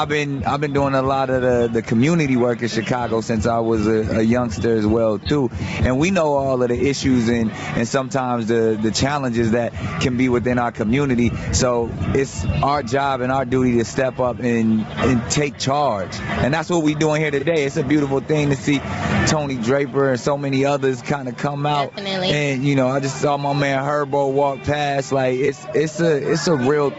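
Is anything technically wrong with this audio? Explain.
Yes. Gain pumping runs through the whole clip: the gain is pulled down on every loud sound, so loud and soft parts end up closer in level, with the level swinging by something like 15 dB. The likely cause is input gain set far too high and a fast limiter clamping down on peaks. On a waveform the envelope looks flattened. The audio also carries nothing above 8 kHz, as a call path passing it through a codec would leave it.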